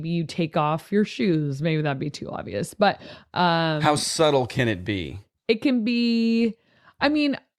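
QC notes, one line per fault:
No fault found.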